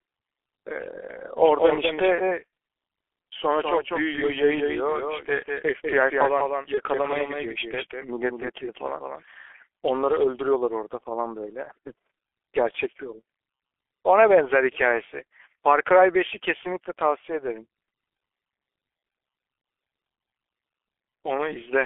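Speech runs muffled and hoarse from start to finish, with nothing below about 300 Hz or above 3.4 kHz and consonants smeared into one another. That is heavy G.723.1 codec damage: at 6.3 kbit/s the coder works in 30 ms blocks and refits its model of the vocal tract only slowly, so fast articulation blurs and the voice takes on a rough, gravelly edge. From 1.37 s to 9.23 s a second, full-band copy of the same speech trails the first by around a fifth of a second at about 5 dB lower. It has no reverberant tail or room colouring, and it switches on and off abruptly at those two points rather than fading. That is a doubled audio track, most likely the same signal picked up again through a slower route and mixed back in. Brief fading smears followed by weak, distorted speech occur at 2.15–2.37 s, 6.74–6.81 s and 19.61–19.64 s. Each fits one 30 ms packet going missing, with VoIP packet loss concealed by the speech codec. 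The decoder filled the hole by repeating its last pitch and filter settings while turning the level down. Because each new frame is decoded from the state of the one before, the voice stays damaged for a short while after audio resumes, which is why the first smear lasts well beyond the 30 ms gap.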